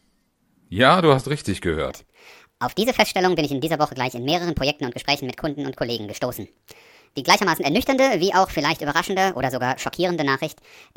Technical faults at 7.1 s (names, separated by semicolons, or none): wrong sample rate